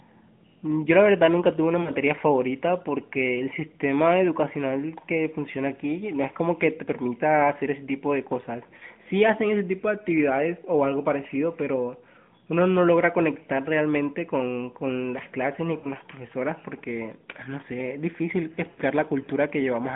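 A speech clip carried over AMR narrowband, with lost AMR speech frames at 1.82, 8.78, 15.78 and 18.7 s. Each time the decoder smears the last good sound forward with falling level, then recovers a bit rough. The gaps run about 40, 20, 60 and 80 ms, which fits one to four dropped 20 ms frames.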